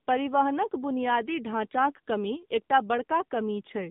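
From the start of the clip to its end, the speech carries the sound of the AMR narrowband mobile codec. Nothing above 3.8 kHz survives, and the usable band sits between about 150 Hz and 3.7 kHz, like a phone line. The codec rebuilds the voice from a vocal-tract model fed with sparse pulses. Here the damage is plainly audible. The voice sounds buzzy and synthetic, which fits a low mode near 8 kbps.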